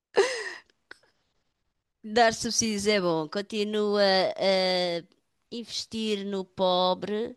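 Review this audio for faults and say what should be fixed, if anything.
No faults found; nothing to fix.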